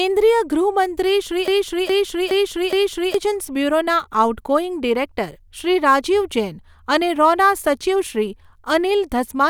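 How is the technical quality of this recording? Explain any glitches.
The recording has one clear glitch, a broken-record loop. From 1.48 to 3.14 s, playback or streaming likely stalled and resent its last fragment, so a 0.42 s piece of speech repeats four times back to back and the speech due there is lost.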